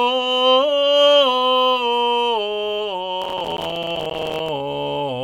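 A music clip with processor overload crackle from 3.24 to 4.49 s. Dozens of roughly 5 ms buffers miss their deadline and drop to silence, producing gritty tearing.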